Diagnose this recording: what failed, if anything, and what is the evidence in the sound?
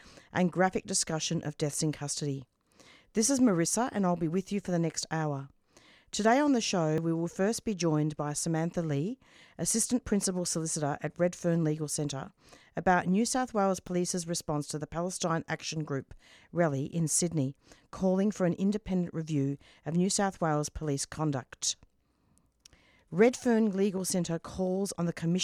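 Jumps at 6.98 s and 13.87 s each skip about 10 ms with no gap, pointing to a likely dropped buffer (overrun): samples were overwritten before the driver collected them.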